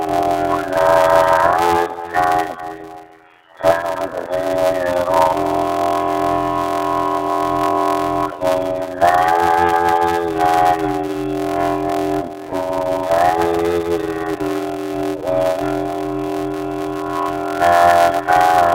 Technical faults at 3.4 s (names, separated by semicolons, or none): block size mismatch (padded)